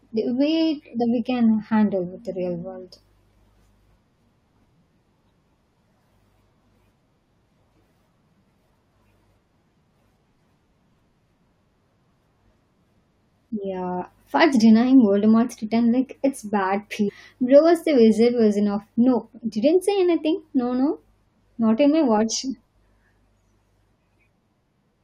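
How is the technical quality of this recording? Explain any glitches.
Three brief glitches interrupt the speech. All are damaged data in a compressed stream. They occur at 0.99 s, at 14.00 s, and from 17.08 to 17.10 s, just after "return like it's bad." Corrupted bytes make the decoder misread frames and lose sync. It then searches for the next frame header. Each event sounds like a short chirp or blip.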